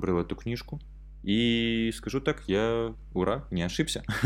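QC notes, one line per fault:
Throughout, mains hum: a ground loop or nearby transformer is coupling the 50 Hz power line into the signal path, leaving a steady low tone with some low harmonics under the speech. It sits only around 15 dB below the speech, so it stays clearly audible.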